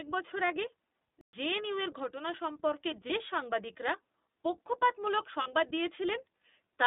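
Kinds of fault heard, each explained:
iLBC codec: The speech was squeezed through the iLBC narrowband codec at 15.2 kbps, coding each 20 ms frame on its own with no reliance on the previous one. That throws away everything above about 3.7 kHz and below about 250 Hz, so the voice sounds boxed-in and telephone-like, and the coding leaves a plainly audible rough, slightly synthetic grain on it throughout the clip.
playback stall: The output went silent for 120 ms at 1.21 s, most likely because the player ran out of data or its thread was held up and nothing reached the output until it recovered. The speech stops dead just after "বছর আগে" and picks up again with "জেএনইউর ঘটনা সম্পর্কে", leaving a hole in the flow that is too abrupt to pass for a natural pause.
lost iLBC frames: Packets went missing and the iLBC decoder covered the gaps by repeating the last pitch cycle blended with noise. At 3.08 s one 20 ms frame is replaced, just before "সাংবাদিকরা পক্ষপাতমূলক". 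At 5.42 s two frames, 40 ms, go, just after the same phrase. Each patch sounds like a brief held, buzzy vowel. Because every iLBC frame stands alone, the voice is right again straight after.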